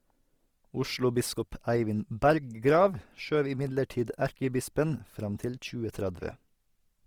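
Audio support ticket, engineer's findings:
Speech throughout, full clip: artefacts from an earlier lossy pass. High-bitrate MP3 container, spectrum reaching 20.2 kHz. Likely low-bitrate audio saved at a high bitrate: artefacts fit a first encode around 24 kbit/s Opus, later re-encoded near 320 kbit/s MP3. Re-encode cannot restore discarded detail. Larger file, damage retained.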